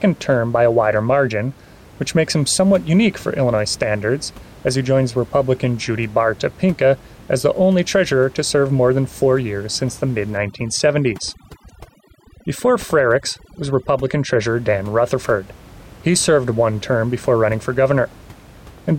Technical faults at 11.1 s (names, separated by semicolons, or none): overdone noise removal